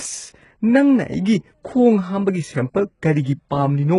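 Speech with HE-AAC compression damage throughout: nothing above 11.1 kHz, and treble rebuilt by band replication sounds gritty and metallic, likely from heavy coding near 12 kbps.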